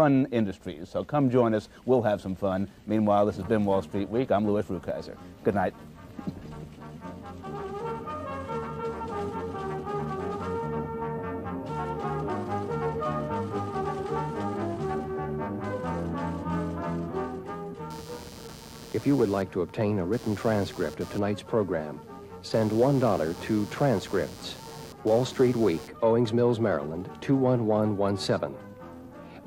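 From 17.90 to 25.90 s, changing processor or graphics load disturbs the shared ground of the audio circuit, producing computer activity noise: a buzzing, chirping layer pulsing at around 150 Hz, roughly 20 dB below the sound, that follows the machine's activity rather than the audio.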